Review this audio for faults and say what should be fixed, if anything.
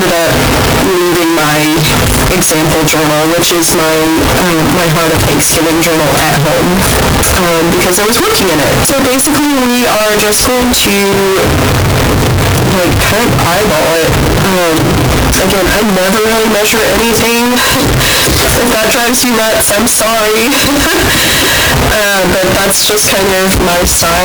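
The 16-bit samples were likely read with signed and unsigned mixed up, so the top bit of each sample is flipped and every zero crossing becomes a jump across the whole range. Throughout the clip the sound is very loud, harsh distortion, with quiet passages as loud as everything else. To prevent this, declare the sample format explicitly at every stage that reads or writes the audio, and check that both ends agree on signed 16-bit samples.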